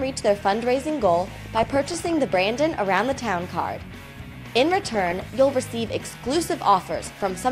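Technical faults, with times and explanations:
1.32–2.18 s, 4.80–5.22 s and 7.12–7.32 s: DAB burbling, a run of watery blips and squelches in the sound. Weak reception lets bit errors slip past error correction into the MP2 audio data. Corrupted samples then put short bursts of noise into individual sub-bands, giving the burbling character. The error rate rises from about half a percent to about one percent across the three patches, and the first patch spans roughly twice as many frames as the second.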